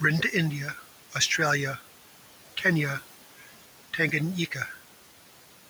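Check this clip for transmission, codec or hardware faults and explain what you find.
One fault runs through the whole recording: noise suppressor artifacts.

Throughout, the background noise drops away in the pauses and swells back under the speech. A noise suppressor is cutting bands it judges to be steady noise by about 12 dB, frame by frame, while the room noise sits about 18 dB below the speech.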